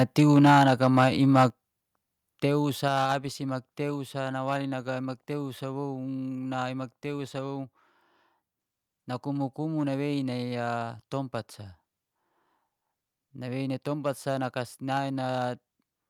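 Hard clipping runs through the whole speech clip. Somewhere in the chain the signal is driven about 6 dB past what one stage can pass, so the tallest peaks are sliced flat. Only a small fraction of samples is affected, so the damage is sparse. Each flattened crest adds high harmonics, heard as brief crackle riding on the loudest moments rather than a continuous fuzz.

Microphone overload hits from 1.37 to 1.45 s. A short, harsh, crackling edge lands on a loud stretch of the speech. A sizeable share of the samples there is cut off, running roughly 1 dB over full scale. This is likely the microphone's input gain set too high, pushing its peaks straight into the converter's ceiling, where their tops are chopped off.

Microphone volume stepped down at 1.5 s, just after that distorted burst. Speech and background together drop about 5 dB in one abrupt step. A second step of about 4 dB comes at 2.88 s, just before "abis imak". 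Each is likely the call software reacting to the overly hot, clipping input by cutting the device's input volume at once rather than easing it down.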